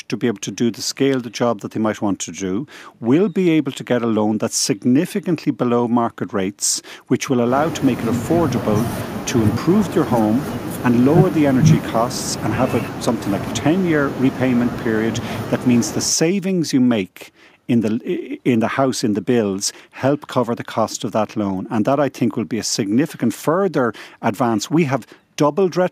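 No technical faults are audible.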